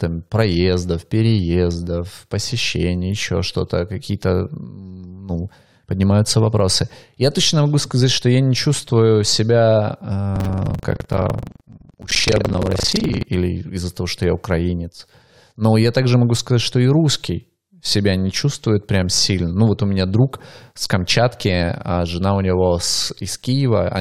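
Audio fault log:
10.33–13.26 s, buffer tearing: the speech takes on a steady robotic buzz at 23.4 Hz, which fits a 2048-sample buffer. The writing process and the playback hardware have drifted out of step and cross inside each period. About a fifth of every buffer replays audio from roughly a tenth of a second earlier. The hard joins at both edges of that stale stretch repeat once per buffer, producing the rattle, which follows the speech rather than running independently of it.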